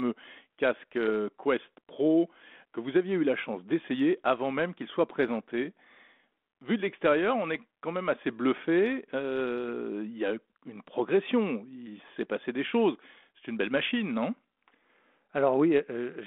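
No technical faults can be heard in the speech, which arrives over a narrow telephone band of roughly 200 Hz to 3.5 kHz through G.726 ADPCM at 32 kbit/s, with only the light texture that this coding leaves.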